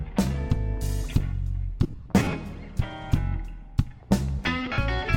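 Bluetooth LE Audio frames went missing twice, and the LC3 decoder filled each gap by replaying the last good spectrum with random signs. From 1.83 to 2.33 s, about 280 ms of audio is lost in short runs of a few tens of milliseconds spread over half a second, so the sound breaks into a brief, noisy smear. Between 4.66 and 4.78 s, about 70 ms goes the same way, a short hiss-like blur with no clean tone.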